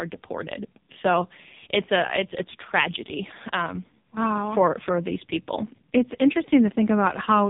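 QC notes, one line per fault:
Throughout: AMR narrowband mobile codec. The speech has nothing above 3.8 kHz, and the heavy buzzy, synthetic quality fits one of the lowest AMR-NB modes, around 5.15 kbps. The codec rebuilds the voice from a vocal-tract model driven by a few pulses in each short subframe. Too few bits leave that excitation coarse, hence the buzz. A plain low-pass filter would dull the sound without making it buzzy or artificial.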